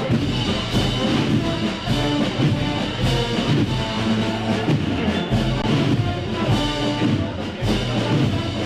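At 5.62 s the sound briefly freezes for about 17 ms. This is an underrun with held sample. The output buffer ran dry, and the converter held its last value, so the waveform sits flat rather than dropping to zero. No audio was lost, and playback resumes where it paused, so the restart is soft.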